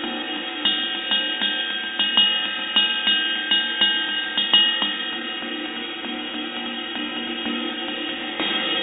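No faults can be heard.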